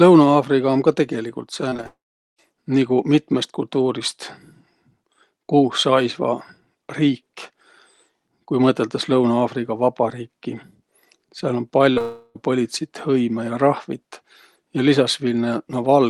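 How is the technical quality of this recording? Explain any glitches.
The recording has network glitches in two places, near 2 seconds and near 12 seconds. It came through a call codec, likely Opus at around 40 kbps, which limits the top end to about 12 kHz.

Repeated packet loss (robotic sound) runs from 1.69 to 1.86 s, right after "um ka tegeligult". Packets kept failing to arrive, leaving five holes of up to 23 ms each. The receiver patched each hole by extending the previous sound, which covered nearly half that span. The result is choppy, broken-up sound.

Long network dropouts follow at 1.87 to 2.39 s and again at 12.01 to 12.36 s. Their likely cause is a stall in the stream. In the first, the extended sound fades into roughly 0.4 s of silence. In the second, the synthetic continuation fills the whole third of a second without going quiet. In both, the audio resumes with that portion missing.

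Short concealed packet loss occurs at 11.93 to 11.97 s and 11.98 to 12.01 s, just before the second dropout. These gaps of about 30 ms and 20 ms were bridged by continuing the preceding sound and then blending back into the real signal. They are heard as quick smears or wobbles.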